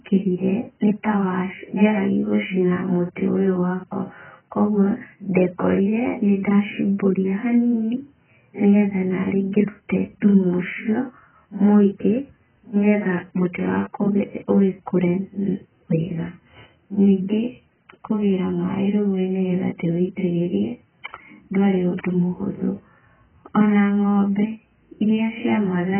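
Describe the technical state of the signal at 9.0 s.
At 9.0 s, as throughout, likely AAC compression at a bitrate near 8 kbps strips everything above 3.1 kHz, leaving the speech dull and smeared.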